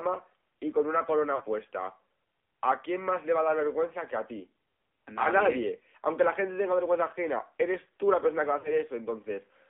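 AMR narrowband mobile codec, throughout: speech squeezed into 300 Hz to 3.5 kHz and rebuilt from a coarse vocal-tract model, buzzy and synthetic, fitting a low rate near 7.4 kbps.

Lost AMR speech frames at 1.36–1.43 s, 4.70–4.72 s and 8.60–8.79 s: the decoder repeats the last good settings with falling gain, giving brief warbly dips, roughly two, one and two frames long.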